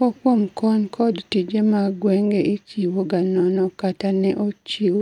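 Nothing in this bit of speech trips the ear as a fault, with no dropouts, glitches or other mishaps turning up anywhere along the way.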